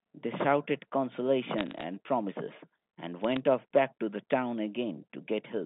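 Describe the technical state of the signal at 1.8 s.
At 1.8 s the digital phone line is corrupting bits, in a burst of bit errors running from 1.58 to 1.83 s at a rate somewhat under one percent. Each flipped bit alters a single sample of the G.711 mu-law stream. Where the hit lands on a high-order bit or on the sign bit of a loud sample, that sample jumps far from its neighbours, producing sharp ticks. Clustered together, they form a brief crackle laid over the speech.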